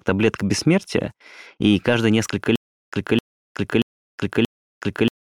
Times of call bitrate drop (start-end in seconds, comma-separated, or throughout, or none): none